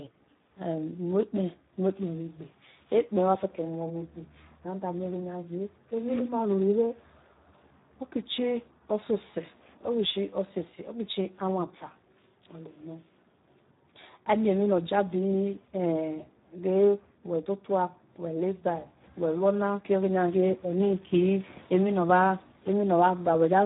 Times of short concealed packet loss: none

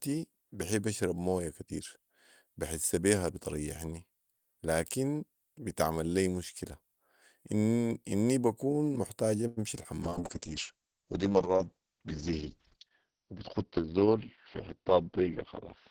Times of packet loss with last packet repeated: none

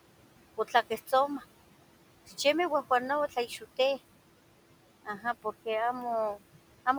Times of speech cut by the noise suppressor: 3.29-3.78, 5.05-5.25

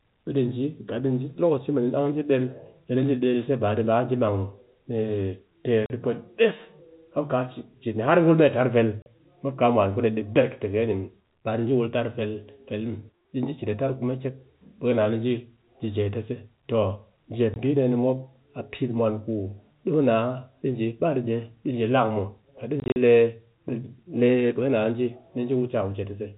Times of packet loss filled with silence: 5.86-5.90, 9.02-9.06, 17.54, 22.80-22.96

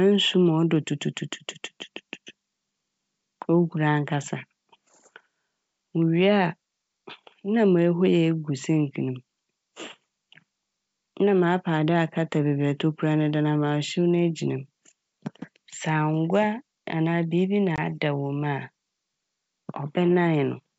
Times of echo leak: none

